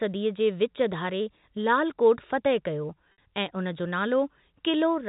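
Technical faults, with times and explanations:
3.12–3.18 s, packet loss with pitch repetition: 60 ms of audio is lost, which fits two dropped packets. The receiver repeats the last pitch period to cover the gap, giving a brief, buzzy held tone instead of the silent hole of a plain dropout.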